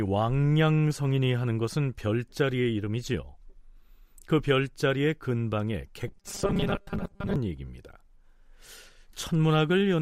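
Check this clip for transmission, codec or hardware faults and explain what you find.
One fault, robotic sound from repeated short buffers, from 6.08 to 7.36 s. The speech turns into a rigid metallic buzz at 200 Hz that still loosely tracks the words. The likely cause is late-arriving audio patched by looping the last 5 ms, so about half the real speech is skipped.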